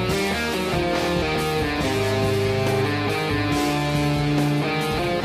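No technical faults can be heard anywhere in the audio.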